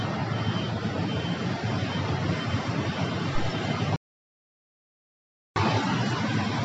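The sound stops dead at 3.96 s and returns at 5.56 s. That is an audio dropout to silence, about 1.6 s long. The gap is silent with no room tone. The likely cause is lost input while recording continued. Whatever sounded then is gone.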